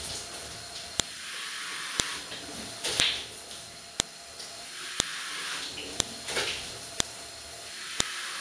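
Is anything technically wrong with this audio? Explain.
Yes. A sharp, loud click snaps through the audio at 1.00, 2.00, 3.00, 4.00, 5.00, 6.00, 7.00 and 8.00 s, once a second regardless of the surrounding signal. This is a file header played as audio: one-second WAV pieces were joined with their header bytes still in place, so those bytes play back as a brief burst of samples.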